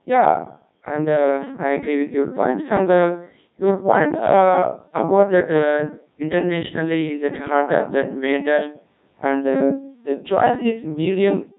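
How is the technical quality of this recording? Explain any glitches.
Technical quality is poor, because the entire recording has passed through a Codec 2 vocoder and is heavily damaged from start to finish. The codec sends only pitch, voicing, energy and a spectral envelope, and the decoder rebuilds the speech from sine waves, so the original waveform is gone. The coarseness fits a rate of about 1.6 kbit/s. Throughout, the speech sounds robotic and buzzy. The lowest bass is taken out by the call microphone processing, which is normal.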